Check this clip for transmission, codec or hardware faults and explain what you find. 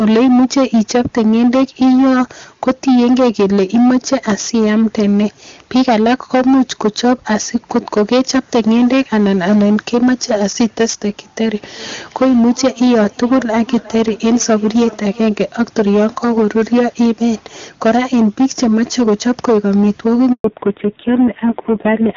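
Four faults are audible: constant overload distortion, a repeating echo in the middle, a brief dropout near the end, and a final loss of high frequencies.

Hard clipping runs through the whole clip: a harsh fuzz on every loud syllable. It is driven about 11 dB too hot, so roughly a sixth of samples are flattened.

Feedback echo between two devices, from 11.37 to 15.41 s: each phrase returns about every 0.4 s, thin and ringing, peaking about 20 dB below the speech. Another device's playback is re-entering a nearby microphone.

Handover gap, 20.32 to 20.44 s: the sound fades and goes silent for 120 ms while the call switches networks and no speech frames arrive.

Fallback to narrowband, from 20.44 s to the end: the sound turns dull and rough, with nothing above 4 kHz. This points to a drop from HD Voice at 23.85 kbit/s to a 5.9 kbit/s narrowband codec. Before that, the wideband codec itself added little or no audible damage.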